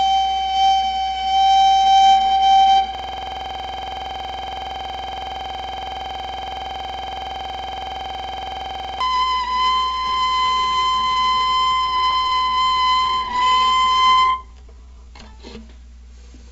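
From 2.95 s to 9.00 s a system hang loop takes over: the driver froze while the hardware kept replaying one 46.44 ms stretch of its ring buffer, which fits a 2048-sample buffer. It repeats about 130 times, making a rigid 21.5 Hz flutter-buzz. Unlike a stutter, nothing new ever emerges.

Between 10.08 s and 13.52 s come repeated stalls (stutter): the jitter buffer ran dry 49 times, each gap bridged by continuing the last sound for at most 24 ms, about 532 ms in all. Nothing is lost, and the sound keeps advancing between hiccups, so it drags rather than loops.

Overlapping that, from 12.63 s to 15.34 s, a jitter buffer slow-down rebuilds the receiver's reserve by repeating single pitch periods or bits of pauses, adding 344 ms and running at 88% speed. Pitch stays put, unlike a slowed tape, and the sound is drawn out smoothly instead of chopped, with nothing above 8 kHz through the G.722 path.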